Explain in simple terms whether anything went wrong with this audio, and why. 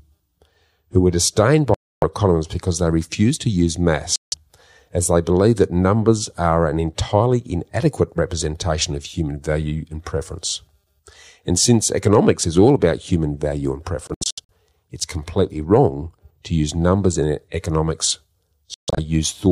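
The sound cuts out briefly at 1.74–2.04 s (after "who were disdained"), 4.16–4.34 s, in short scattered gaps at 14.07–14.50 s and 18.74–18.99 s. This is likely a Bluetooth dropout, where late wireless packets are skipped and playback resumes further along.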